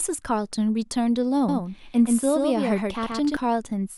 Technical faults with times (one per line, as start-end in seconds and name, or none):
1.49-3.37 doubled audio track